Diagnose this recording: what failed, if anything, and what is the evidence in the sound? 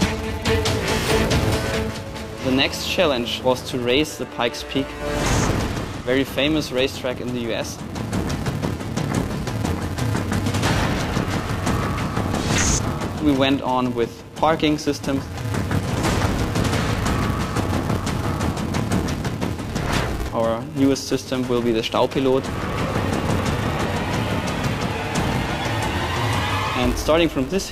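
A filter restarted on every block is at fault in the processing stage, audible throughout as a steady buzz near 375 Hz whose loudness tracks the signal. The filter's memory resets at each block boundary, so every block opens with a small transient; the rate fits a 128-sample block. A spectrogram would show harmonic lines at 375 Hz multiples, and a waveform would show regularly spaced ticks.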